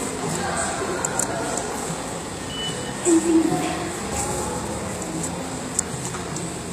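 From start to finish the treble has a gritty, metallic edge that does not sit naturally on the lower range, and the damage is plainly audible. This is likely HE-AAC compression: the lower spectrum is coded directly while the upper band is rebuilt by spectral band replication, copying lower bands upward under a coarse envelope. The sound stays bright, but the upper harmonics no longer line up with those below, which fits a bitrate of roughly 24 kbps.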